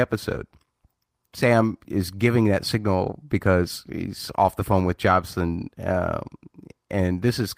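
No technical faults can be heard anywhere in the speech recording, with the signal holding steady throughout.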